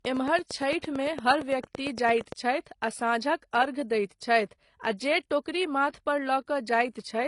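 From the first moment to the end, the speech shows transcoding between lossy codecs. Nothing is present above 11 kHz. Smeared, swirly high-frequency texture from one coder sits under a second, cleaner layer of quantisation grain. This fits a low-rate HE-AAC stage at about 24 kbit/s likely re-encoded to AAC-LC at 64 kbit/s. A single low-bitrate encode would give one consistent artefact character, but here two distinct kinds are stacked.

From 0.05 to 2.33 s a train of clicks runs over the audio. There are about twenty sharp, near-identical ticks at a steady 8.8 per second, standing roughly 10 dB above the speech and clearly audible in the gaps as well. Unlike random crackle or codec dropouts, which vary in shape and timing, these repeat like a metronome, which points to a likely electrical or interface source injecting pulses.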